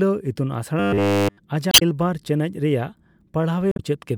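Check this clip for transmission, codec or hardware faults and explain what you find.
Two kinds of fault are audible in this speech clip: a stretch of robotic sound and two short bursts from damaged compressed data.

From 0.80 to 1.38 s the speech turns into a rigid, metallic buzz pitched at 100 Hz. It tracks the rough shape of the speech throughout that stretch. This is robotic sound from repeated short buffers, likely caused by new audio arriving too seldom. To fill the gaps, the playback side keeps looping the last fragment it holds. A buzz at 100 Hz means a repeat every 10 ms, so the real audio in between is skipped.

From 1.69 to 1.82 s and again from 3.71 to 3.80 s there are brief glitches that break into the speech. These come from damaged data in a compressed stream. When part of the encoded data is missing or overwritten, the decoder misreads those frames and loses its place. It then has to hunt for the next valid frame header before it can produce clean output again.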